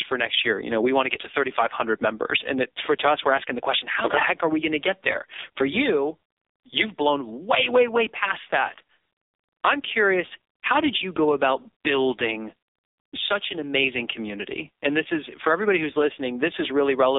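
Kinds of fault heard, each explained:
AMR narrowband mobile codec: The speech is confined to a telephone band of roughly 300 Hz to 3.7 kHz, with nothing above 3.7 kHz, and the damage is heavy throughout. A vocal-tract model driven by sparse pulses rebuilds the speech, so it sounds buzzy and synthetic, which fits a low mode around 5.9 kbps. A plain band-limiting filter would only dull and thin the sound. It would not add this artificial, reconstructed texture.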